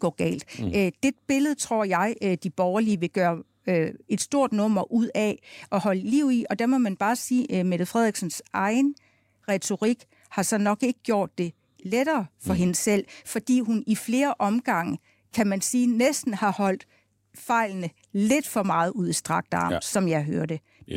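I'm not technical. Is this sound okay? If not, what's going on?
Yes, nothing wrong turns up anywhere in this recording.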